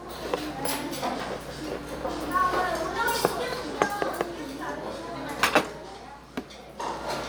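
There are no technical faults to describe anywhere in this recording.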